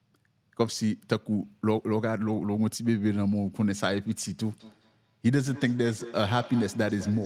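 A speech recording with feedback echo between two devices from 4.5 s to the end at 7.26 s. Each word returns about a fifth of a second later, sounding thinner and more ringing than the original. The loudest repeat sits about 17 dB below the speech. Two devices on the same call share a room. One plays back what the other's microphone sent, and that microphone hears it again. Neither echo canceller removes sound played by the other device.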